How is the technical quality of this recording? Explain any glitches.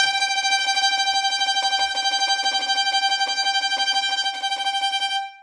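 The technical quality of this recording holds up, with no glitches to explain.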